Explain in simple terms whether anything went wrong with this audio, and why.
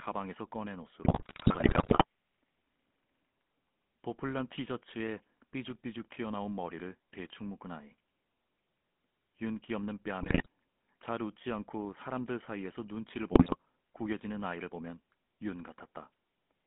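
The whole clip has gone through the GSM full-rate codec, the speech coder used in early mobile phones. It rebuilds speech from a rough model of the throat and mouth driven by a string of pulses rather than sending the actual waveform, so the speech picks up a buzzy, gravelly edge. The line also only passes sound between roughly 150 Hz and 3.5 kHz, which makes the speech thin and muffled, and the damage is easy to hear.

On top of that there are three bursts of GSM bit errors, where the signal got scrambled on a weak radio link. The longest runs from about 1.04 to 2.04 s, with shorter hits at 10.22 to 10.46 s and 13.32 to 13.56 s. Corrupted data reached the decoder and it misread the settings for short chunks of sound, so the speech briefly breaks into squawks, pops and gargling before recovering.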